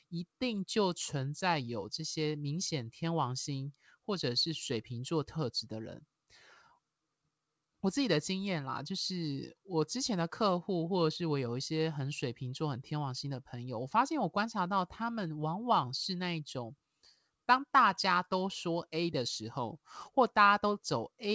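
Nothing stood out on listening to this speech, which came over the G.722 call path with its expected ceiling at 8 kHz.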